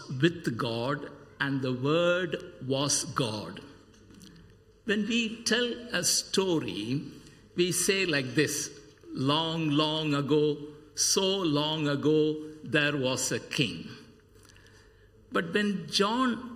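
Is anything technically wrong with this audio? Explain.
Yes, there's channel delay (comb filtering) throughout: one side runs under a millisecond late, so the mono sum cancels at evenly spaced notches from around 700 Hz, sounding hollow.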